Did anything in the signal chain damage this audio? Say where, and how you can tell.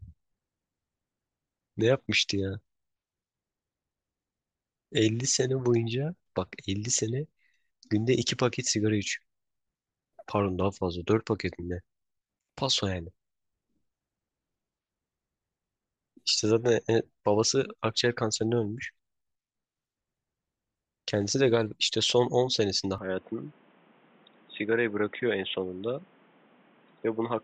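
Yes. From 22.98 s to the end of the speech, the sound abruptly turns dull and boxy: nothing is left above 3.8 kHz, the level falls by roughly 5 dB, and a new background noise sits around 30 dB below the signal. This points to the input being switched to a poorer device at the driver stage, likely a headset's call profile or a lesser microphone, with its own narrow band and noise. The change happens instantly, with no silent gap.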